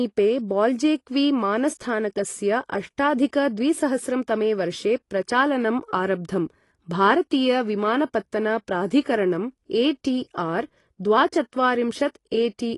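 A speech recording with plainly audible codec damage throughout. Nothing is present above about 11.5 kHz, so the top of the spectrum is simply missing and the sound is dull. The remaining detail sounds smeared and unsteady. This is likely AAC compression, AAC-LC at a low bitrate that fits roughly 32 kbps. At that rate the encoder discards high bands entirely and quantises what is left coarsely.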